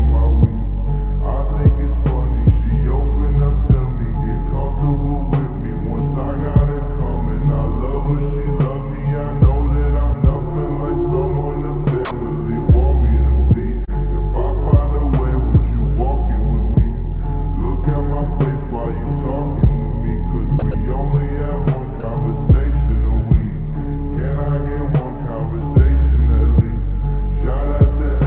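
At 12.05 s the sound drops out for 60 ms, until 12.11 s. Steady comfort noise takes its place. This is sound dropped by the voice detector, most likely because the sender judged that stretch to be background and stopped transmitting. The receiver then filled the gap with generated noise. The same thing happens three more times, each lasting 30 ms: at 20.59 s, 20.71 s and 22.00 s. Each sounds like a quick flat hiss where the sound should be.

At 13.85 s there is a short concealed packet loss. About 30 ms of audio arrived too late for the decoder, so the receiver extended the preceding sound for 22 ms and then blended back into the real signal at 13.90 s. The result is a brief smear or wobble. All of this sits on a narrowband call path with nothing above 4 kHz, which points to a 64 kbps G.711 A-law codec.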